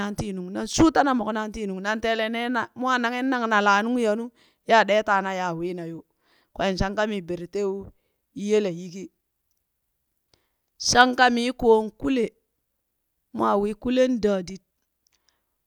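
No technical faults are audible.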